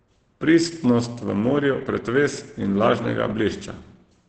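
Throughout the speech, the sound is muffled and hoarse. Nothing reaches above about 8.7 kHz, so the top end is simply gone. Consonants lose their edge and the tone turns rough. The damage is heavy from start to finish. This is likely Opus compression at a very low rate, which fits about 12 kbps. At that rate the encoder has dropped into its speech mode. That mode models the voice coarsely and caps the bandwidth, which gives this dull, grainy sound.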